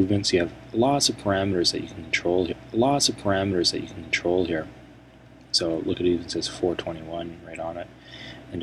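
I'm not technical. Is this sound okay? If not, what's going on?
No. There's a stream segment repeated: the player fetched the same chunk of audio twice. So from 2.51 s to 4.51 s, about two seconds of the sound play a second time, with a small blip where it jumps back.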